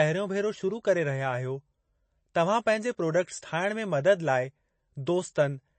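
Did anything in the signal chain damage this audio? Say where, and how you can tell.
Yes. Throughout the clip the speech sounds watery and swirly, with plainly audible damage, and nothing at all reaches above 8.3 kHz, so sibilants lose their edge and take on a metallic, chirpy quality. That points to the codec stage, most likely MP3 compression at a low bitrate, which fits something around 32 kbps. Starved of bits, the encoder cut the treble at a fixed point and dropped weak frequency lines that flicker on and off from frame to frame.

At 2.34 s a brief hiss, about 10 ms long, comes just ahead of a sharp onset, and the attack itself sounds softened. This pre-echo also comes from the codec stage. The transform spreads its quantisation noise evenly across a whole block. Because this attack landed late in its block, noise scaled for the loud onset leaked into the quiet moment before it and was heard there as a short smear of hiss.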